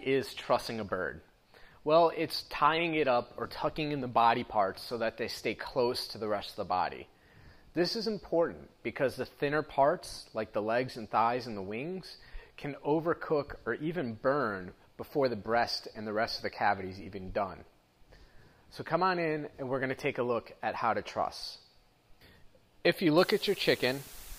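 At 23.18 s, low bit depth with dither sets in and lasts to the end at 24.39 s. The sound drops to about 7 bits. Dither turns the rounding error into steady white noise. A constant, even hiss appears, roughly 15 dB below the signal, without distortion.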